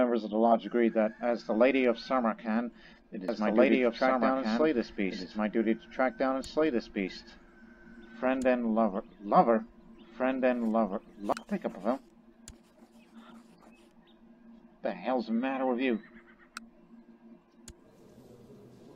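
From 3.28 s to 11.32 s, a doubled audio track appears, likely from a second, slower capture path being mixed in. An identical full-band copy trails about two seconds behind at roughly equal loudness, dry and uncoloured, starting and stopping abruptly.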